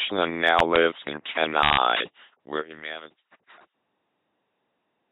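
From the start, the speech has the buzzing, mechanical character of an LPC-10 vocoder at 2.4 kbit/s. Each moment is rebuilt as either a pulse-driven buzz or noisy hiss through a simple vocal-tract filter. A spectrogram shows evenly spaced pulse harmonics and nothing above 3.9 kHz.

From 2.25 s, as the level falls through a fade-out that ends at 5.12 s, truncation distortion on the fade appears. Too few bits are kept with no dither, which fits about 9-bit resolution. From 2.66 s onward the tail turns gritty. On the waveform it looks like coarse square steps, and the spectrogram shows broadband speckle.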